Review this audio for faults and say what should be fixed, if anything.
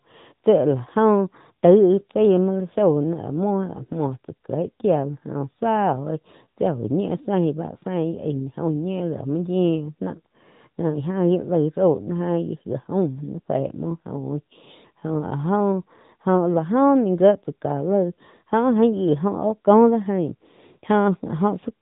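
The whole clip carries AMR narrowband mobile codec damage. Nothing gets through above 3.8 kHz, and the speech has that plainly audible buzzy, synthetic edge of a vocal-tract model rebuilt from sparse pulses, which fits a mid-range AMR-NB bitrate of around 10 kbps. To prevent it, record or route the call over a wideband path, or capture the source locally instead of through the mobile network.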